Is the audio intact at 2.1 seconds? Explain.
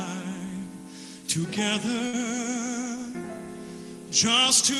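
No. From 2.07 to 2.15 s a burst of packet loss removes about 60 ms of audio. The receiver fills roughly 57 ms by stretching the last sound and fading it, so a held, dimming tail replaces the missing part. That distinguishes it from a dropout to silence or a repeating stutter.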